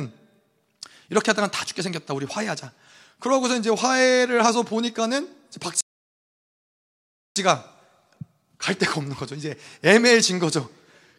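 At 5.81 s the speech drops into silence and stays there until 7.36 s, a rebuffering stall lasting about 1.55 s. The player exhausted its downloaded audio and halted playback until more data arrived. When sound returns, it picks up at exactly the point where it stopped, with no skipped material and no overlap. Nothing is lost, but the gap adds roughly a second and a half to the clip's running time.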